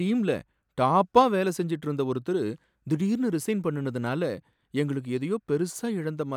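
Speech recording, with no technical fault to report. Nothing calls for a time, a value or a cause.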